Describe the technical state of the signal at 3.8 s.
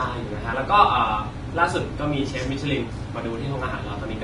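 Vorbis compression is audible at 3.8 s and runs through the whole clip: the speech is band-limited with nothing above 10.5 kHz, and the treble is hissy and grainy, with roughened tones and smeared consonant onsets. This likely comes from a low-bitrate encode, around 30 kbps, where coarse quantisation replaces fine high-frequency detail with noise of similar energy.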